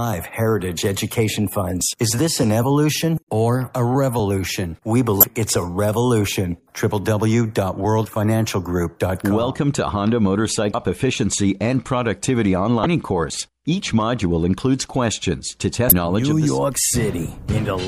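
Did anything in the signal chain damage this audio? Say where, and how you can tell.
Yes, the damage is at the codec stage: there's damaged data in the compressed stream. You get four short glitches, each around a thirtieth of a second, at 5.20–5.24 s, 10.71–10.75 s, 12.83–12.86 s and 15.89–15.92 s. They're brief. That's corrupted frames: the decoder hits bad bytes, turns garbage into a blip, loses sync, then hunts for the next valid frame header and carries on.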